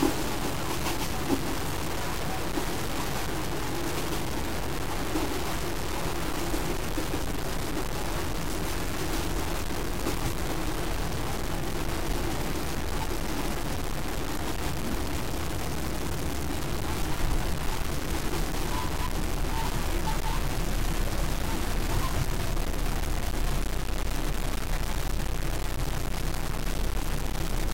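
Low bit depth without dither runs from start to finish. The grit tracks the sound, so quiet passages break into a sputtering, grainy rasp with an error nearly as loud as the signal. This likely comes from truncation to about 4 bits without dither.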